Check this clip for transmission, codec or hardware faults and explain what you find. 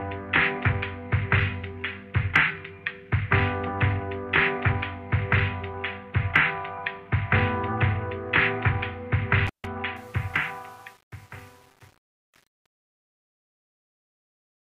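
Two faults are present: a brief intermittent contact and truncation distortion on the closing fade.

At 9.47 to 9.67 s there is an intermittent contact. A loose plug or cable lost connection for about 147 ms, so the signal path was physically broken rather than muted. The sound drops out abruptly, with crackle at the moment the contact opens and again as it recloses, and faint hiss fills the gap.

From 9.96 s to the end of the clip there is truncation distortion on a fade. The fade-out, which runs from around 10 s to 14.7 s, was processed at an effective 8 bits with no dither, so the quietest levels fall onto a handful of coarse amplitude steps. From 10.08 s onward the waveform degrades into near-square steps, and the tail sounds gritty and granular.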